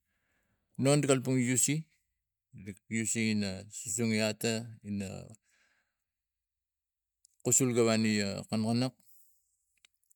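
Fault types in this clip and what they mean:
No technical faults can be heard in this speech recording. The audio runs without any audible defect from beginning to end.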